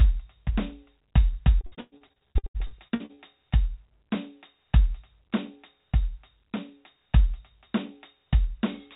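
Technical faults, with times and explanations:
1.61–3.22 s, repeated packet loss (robotic sound): the music breaks into a rapid run of holes, the longest about 112 ms, each patched by stretching the preceding sound, so nearly half the span is filler. That chain of repeats gives the robotic stutter, unlike a single clean dropout.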